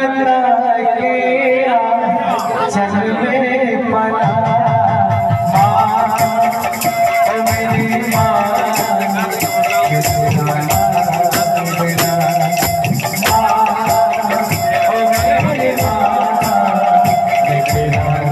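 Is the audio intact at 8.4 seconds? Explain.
Yes, the audio at 8.4 seconds is intact, with no dropout, click, distortion or other audible fault at that moment.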